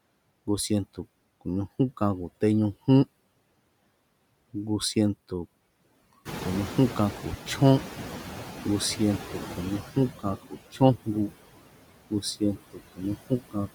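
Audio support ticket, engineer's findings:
Background pumps down between phrases and swells under the speech, throughout. Noise suppressor artifacts: frame-by-frame band gating, roughly 19 dB of noise reduction.

Room noise jumps about 14 dB near 6.5 s and comes through loud at first, then settles, 6.25 to 9.82 s. Noise suppressor catching up: estimate lagged about 3.6 s, only about 11 dB cut meanwhile.

Speech dips and sounds swallowed at 10.42 to 10.81 s (about 16 dB, roughly 0.2 s) and 12.1 to 13.69 s (about 20 dB, roughly 0.4 s). Speech cut by the noise suppressor: quiet speech misclassified as noise.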